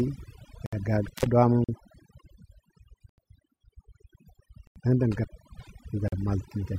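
Overdone noise removal runs through the whole speech clip. The reducer is pulling individual frequency bands down whenever they sit near its noise estimate, so the background collapses to near silence with twinkling specks, and the quieter parts of the voice are cut along with it.

At 0.66 to 0.73 s there is a block of digital silence of about 65 ms. The signal drops straight out and returns with no fade. From 1.03 to 1.26 s an intermittent contact opens the line for about 150 ms, with crackle at the edges and faint hiss in between. Further blocks of digital silence follow at 1.64 to 1.69 s (43 ms) and at 3.09 to 3.18 s (85 ms). These lengths fit output buffers of 2048 and 4096 samples at 48 kHz that were not filled in time. Each one is heard as a short, hard-edged hole.

At 4.67 to 4.76 s another 85 ms block of digital silence lands just before "dəng dəng". Right after those words, from 5.12 to 5.70 s, a second intermittent contact opens for about 340 ms with crackling edges. 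A final 43 ms block of digital silence sits at 6.08 to 6.12 s.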